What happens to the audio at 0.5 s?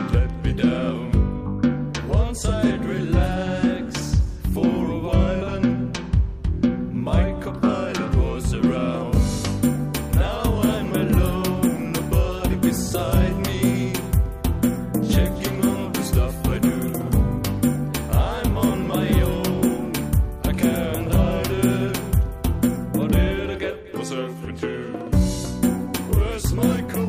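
Nothing goes wrong at 0.5 s. The audio plays through that moment intact, with no dropout, click or distortion.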